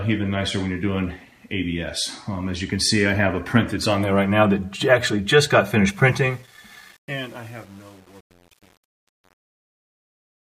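From 5.88 s, truncation distortion on a fade: undithered steps, fitting an 8-bit word, make the fade gritty from 6.07 s. The grit tracks the falling level, unlike steady hiss.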